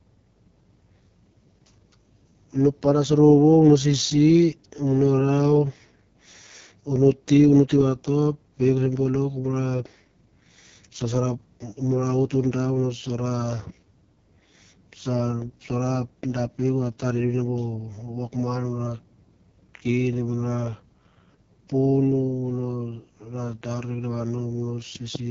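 Throughout, AMR wideband codec damage is heavy. Speech sounds rough and raspy, which fits its lowest 6.6 kbit/s mode. Nothing remains above 6.8 kHz.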